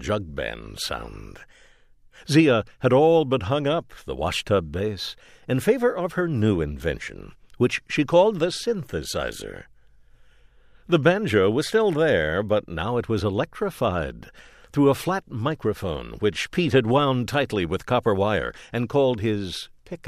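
Sample clock jitter runs through the whole clip. The converter's timing wanders by something like a microsecond or two, so each sample lands a little off its proper instant. Where the speech waveform changes fastest the timing slip turns into the largest amplitude error, adding a grainy hiss roughly 40 dB below the signal. It thickens on loud, bright passages and sibilants, and drops away entirely in the pauses.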